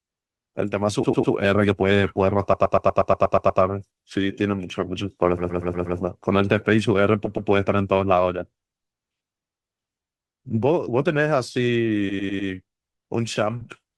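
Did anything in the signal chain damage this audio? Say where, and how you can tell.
Yes. Repeated frames at 1.03–1.33, 2.53–3.61, 5.37–5.97, 7.25–7.49 and 12.09–12.49 s make the speech stutter as one 100 or 120 ms block replays, nine extra times near 2.5 s. Compressed frames were written or sent again in storage or transport, so the decoder replayed them and the audio grew by about 2.6 s.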